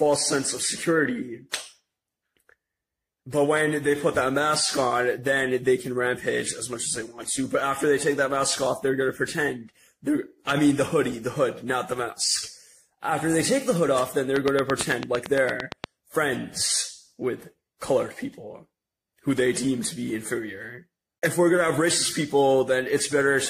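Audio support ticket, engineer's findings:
Regular ticking over the audio, 14.36 to 15.85 s: a train of clicks at 8.8 per second, about fifteen near-identical pulses standing well above the signal. Likely external interference or a struggling interface injecting a periodic pulse.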